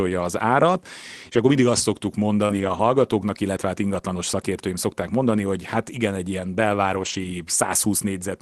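A speech clip carried over a call link, with a brief smeared wobble at 2.45 to 2.51 s where about 40 ms of audio never arrived in time. That is short concealed packet loss: the receiver stretched the preceding sound to bridge the hole, then blended back into the real signal. Right after, from 2.49 to 2.83 s, and again from 6.89 to 7.23 s, the speech turns rougher and noisier for roughly 180 ms of each span. That is a lost packet rebuilt from error correction: the missing frames were replayed from low-bitrate copies carried in the following packets, so nothing drops out, but detail is coarser.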